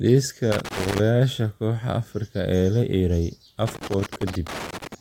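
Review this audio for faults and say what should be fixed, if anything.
Loose connector crackle breaks up the speech from 0.52 to 1.00 s and again from 3.67 to 4.95 s: a worn contact chops the signal, showing as ragged waveform dropouts with spikes and broadband vertical streaks on a spectrogram. Clean or replace the suspect cable and connector, and secure it against movement.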